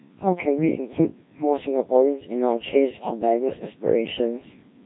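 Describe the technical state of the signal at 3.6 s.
The speech at 3.6 s, like the whole clip, passes through a Codec 2 vocoder, apparently near 1.3 kbit/s, rebuilt from pitch, voicing, energy and envelope alone, so it sounds heavily robotic and buzzy, with nothing above 3.8 kHz.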